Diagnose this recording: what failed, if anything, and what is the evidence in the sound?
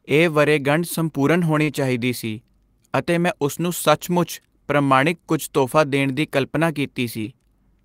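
The failure is in the network path: short concealed packet loss, twice. Around 1.63 to 1.69 s there's a brief smeared wobble where about 40 ms of audio never arrived, and again at 7.21 to 7.25 s a shorter blur covering about 20 ms. Each time the receiver's concealment stretched the last bit of speech, pitch-continued or noise-shaped, to fill the gap, then crossfaded back into the real signal once packets resumed.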